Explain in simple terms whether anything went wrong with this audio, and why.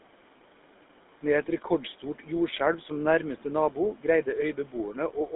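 Two things went wrong, and both last the whole recording. First, there are noise suppressor artifacts: a cleanup stage keeps turning the faint room noise down between words and letting it back up under them. This differs from plain hiss, which would stay steady, and from dropouts, which would cut the speech itself.

Second, the speech passed through the GSM full-rate codec, the early mobile-phone coder. It rebuilds each voice from a simplified model driven by regular pulses, which gives the speech a clearly buzzy, gravelly roughness, and it keeps nothing above about 3.8 kHz, so the sound is also muffled. That grainy buzz is what sets it apart from an ordinary phone line, which would only sound narrow.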